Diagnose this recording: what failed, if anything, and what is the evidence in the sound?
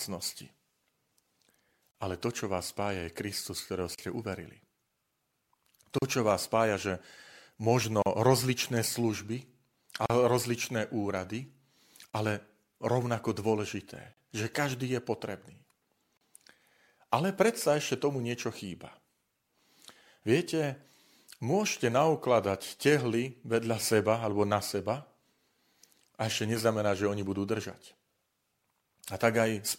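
Codec stage: the speech was encoded as separate pieces about 2 s long and joined without trimming each run's start delay and end padding. Each join leaves a gap at a join of encoded pieces, a 37 ms silence with smeared edges, at 1.91, 3.95, 5.98, 8.02, 10.06, 12.10, 14.13 and 16.17 s, before the speech resumes where it stopped.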